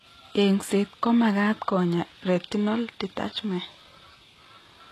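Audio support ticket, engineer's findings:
Likely HE-AAC compression at very low rate, consistent with a 16 kbps stream, throughout. Treble rebuilt by spectral band replication rather than coded, so harmonics misalign above the crossover. Plainly audible: gritty, lispy s sounds; nothing above 12.3 kHz.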